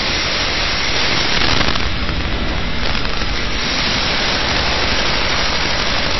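Integer overflow runs through the whole recording of everyday sounds. The level was pushed about 8 dB past the top of the integer range. Nothing limited it. So every peak over the ceiling wrapped around to the opposite extreme. Roughly 7 percent of the samples are affected. Each loud moment breaks into violent cracks. They are far harsher than clipping.

The audio also sounds heavily data-compressed, and MP3 compression is the likely cause. Nothing remains above 5.8 kHz. The encoder cut the treble at that point to save bits. The damage is plainly audible. Weak frequency components drop in and out between frames. This gives a watery, swirling texture. High, hissy sounds turn metallic and chirpy. Sharp attacks smear. The degree of loss points to a very low bitrate, around 24 kbps.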